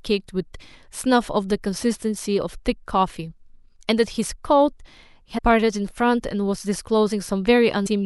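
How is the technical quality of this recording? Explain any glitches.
Two small glitches spoil the recording. Both are compressed frames skipped, once at 5.37 to 5.39 s and again at 7.85 s. Each time the sound jumps ahead by about five frames, roughly 150 ms. The frame length is about 26.1 ms, which fits an MP3-style frame of 1152 samples at 44.1 kHz. Those frames never reached the output. Either they were missing, or the decoder rejected them as damaged. Overlapping neighbour frames smear each join. So you hear a short blurred blip and a small jump, not a sharp click.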